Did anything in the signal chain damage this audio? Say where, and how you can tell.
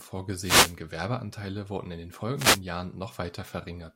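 Yes. At the radio link, two wireless microphone noise hits occur, 0.38–0.78 s and 2.35–2.62 s. These are swishes of static rising over the speech as the FM signal fades under cancelling reflections. It is hiss, not the silence or repetition of digital dropouts.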